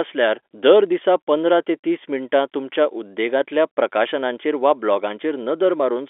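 Nothing faulty turns up in this speech; the band sits at the usual telephone-line 300 Hz to 3.5 kHz, which fits 64 kbps G.711 mu-law coding.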